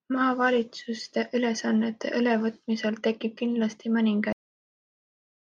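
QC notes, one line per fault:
4.33–5.51 s, cut-off end: the speech stops abruptly at 4.33 s, mid-sound, and the remaining 1.2 s is flat digital silence. There is no natural decay or room tail. The closing audio buffers were never written to the file or played out, so the waveform simply ends where the last written block finished, and everything after it is empty samples rather than quiet recorded sound.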